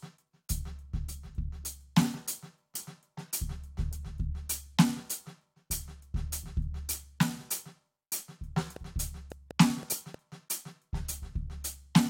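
At 2.74 s the music jumps abruptly forward with a small blip, as if a stretch of the piece had been cut out. This is likely a stream segment skipped: one chunk of the segmented stream failed to load, and the player carried on with the next.

From 8.76 to 10.15 s there is a train of clicks, about seven sharp ticks at an uneven pace averaging 3.6 per second, peaking about 5 dB above the music. Their similar shape points to a likely external pulse source, such as nearby equipment or a faulty connection.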